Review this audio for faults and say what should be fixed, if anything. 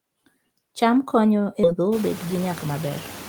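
Noise suppressor artifacts run through the whole speech clip. Noise is pulled down by about 18 dB in gaps and returns under speech. Ease the suppression depth or use a gentler suppressor so the residue stays steady.

A skip ahead occurs at 1.63 to 1.65 s. About 0.7 s of audio was discarded and the two sides spliced with no fill, so playback jumps forward. Size the jitter buffer to absorb late bursts rather than dropping queued audio.

A jitter buffer speed-up runs from 1.73 to 2.91 s. Short pitch-period pieces totalling roughly a tenth of a second are cut, so speech plays at 109% speed with unchanged pitch, sounding hurried. Limit the rate of buffer drain, and smooth the network delay so packets do not arrive in bursts.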